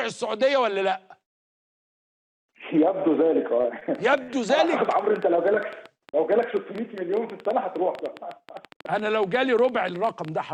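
At 3.61 s and again at 3.79 s there is short concealed packet loss: about 20 ms of audio each time failed to arrive, and the receiver bridged each hole by extending the preceding sound. Each is a brief smear or wobble rather than a dropout, which sets it apart from a click: the gap is reconstructed, not struck.

From 3.95 s to the end, a train of clicks runs over the audio, about 8.8 per second at an irregular pace and peaking roughly 5 dB above the program. Stray interference or a struggling interface is the likely cause. Unlike concealment smears, these pulses repeat with the same shape and continue through pauses.

At 4.23 to 4.36 s, a burst of packet loss takes out about 40 ms in a row. The concealment holds and fades the last sound for roughly 47 ms before the audio resumes a little further on, so it sounds like a held buzz or fading hiss with a jump, longer than the earlier smears.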